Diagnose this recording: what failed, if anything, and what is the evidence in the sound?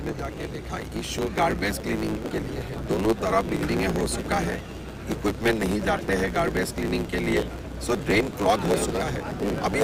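A block size mismatch (truncated) at the driver or buffer stage runs throughout. A 109 Hz buzz and 1.16x faster playback at normal pitch fit 512-sample blocks losing their ends.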